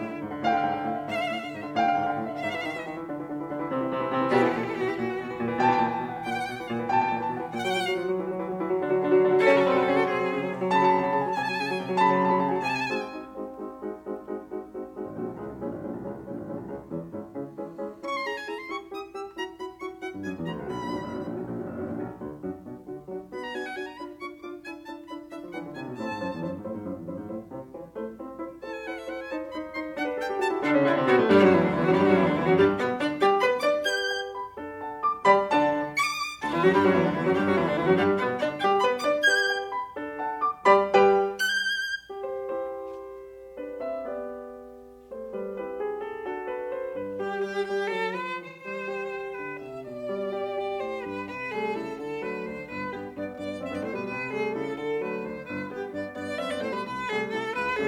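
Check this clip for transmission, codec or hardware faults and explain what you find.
There's AAC frame loss with concealment in this music, in two spots. At 29.45 to 29.51 s a gap of about 43 ms, consistent with one lost frame, turns into a brief smeared, phasey patch. At 48.48 to 48.67 s the gap is about 128 ms, suggesting three frames in a row, and the smear is longer. In both cases the decoder had no data, so it rebuilt the gap from the last good spectrum with shuffled signs or interpolated energy.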